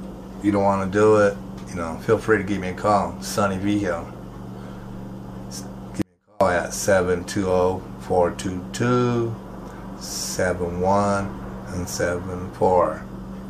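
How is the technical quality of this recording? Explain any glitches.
The recording has one clear glitch, an audio dropout to a faint residue, from 6.02 to 6.41 s. For about 0.39 s the sound collapses abruptly, leaving only a faint leak of itself, roughly 35 dB below its normal level, before snapping back. The likely cause is a brief loss of the wanted signal while the path behind the break stayed live. A pause or fade would not behave this way, and unlike a hard dropout to silence, the gap is never fully empty.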